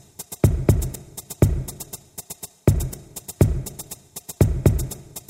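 At 2.94 s, an overlap between stream segments removes about 5 ms of sound, so the waveform jumps abruptly: a tiny skip, visible as a thin vertical spectrogram line.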